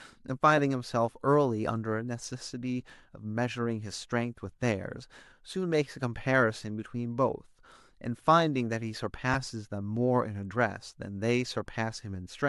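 At 9.34 s, one frame of the Bluetooth LE Audio stream was lost, a gap of 7.5 ms, which fits a single LC3 frame. The decoder patched the hole by repeating the previous spectrum with randomised phase signs. In the speech this is a very brief grainy smear, a tiny noisy blur where the sound momentarily loses its clear shape. The faint breathy edge heard throughout is likely light LC3 compression.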